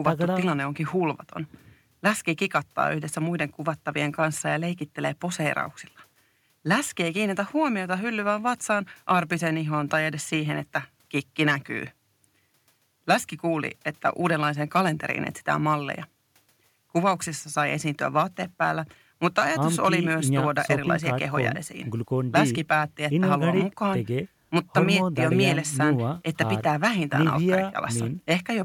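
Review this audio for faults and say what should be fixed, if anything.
No faults detected, so nothing needs fixing.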